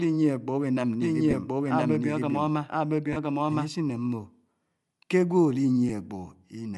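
Throughout the clip, the speech carries the breathy, grainy edge of Bluetooth LC3 compression, likely from an LC3 link running around 48 kbps with 10 ms frames. The encoder drops much of the upper spectrum and fills it with noise, so the damage is plainly audible.

From 1.02 to 3.68 s a doubled audio track appears, likely because a second copy of the same speech was mixed in about a second late. That copy is roughly as loud as the original, full-band and dry, and it starts and stops abruptly.

Lost LE Audio frames occur at 1.31–1.33 s (20 ms), 3.13–3.17 s (30 ms) and 5.89 s (10 ms). The decoder covers each brief gap by reusing the previous spectrum with randomised signs.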